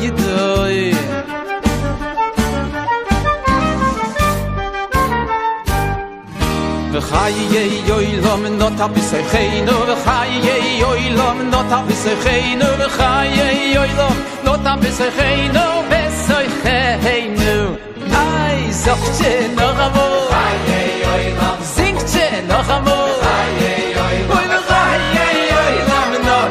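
At 25.02 s the sound stutters until 25.09 s: a short slice of about 23 ms plays three more times in a row. This is a repeated-frames fault, which fits a single compressed frame being written or sent again so the decoder replays it. The repeats lengthen the audio by about 70 ms.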